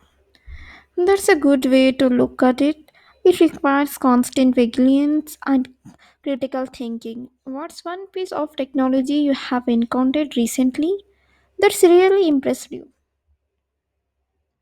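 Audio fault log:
4.25 s and 8.27 s, compressed frames skipped. The sound jumps forward, by about 20 ms at 4.25 s and about 40 ms at 8.27 s, which fits one and then two lost 20 ms frames.
5.1 to 6.47 s, 7.75 to 9.07 s and 11.97 to 13.25 s, zipper noise. The level falls about 10 dB, rises about 10 dB, then falls about 10 dB again. Each move is made in unsmoothed 2 dB steps, about four per second. Every step ticks, so a zipping rides on the sound.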